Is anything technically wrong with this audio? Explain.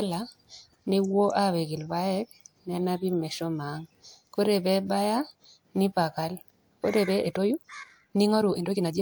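Yes. From 7.02 s to the end, just after "nipakal ore", there is a time-stretched section. Software likely squeezed this stretch to run 1.49 times faster, dropping short slices to hold the pitch steady. The speech abruptly turns rushed while its pitch stays unchanged.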